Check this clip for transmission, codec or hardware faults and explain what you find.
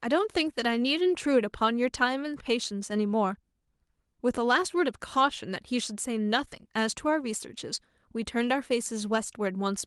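No faults can be heard.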